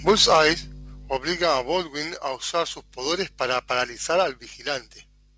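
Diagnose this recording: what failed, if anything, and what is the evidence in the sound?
Right at the start, from 0.07 to 0.49 s, the loudest syllables pick up a harsh, crackly edge with flattened tops. That's microphone overload, most likely at the input converter. The mic gain was set high enough that peaks ran about 7 dB past full scale, so the converter simply chopped them off. A fair number of samples are sitting at the rail, roughly one in twenty over that stretch.

There are also two sudden drops where the voice and the room noise fall together: about 3 dB at 0.11 s, early in that distorted burst, and about 6 dB more at 1.17 s. That pattern is the microphone volume being stepped down, likely by the call software's gain control reacting to the clipping and cutting the device's input level in discrete jumps rather than ramping it. The call path's band limit is audible too, with nothing above 8 kHz.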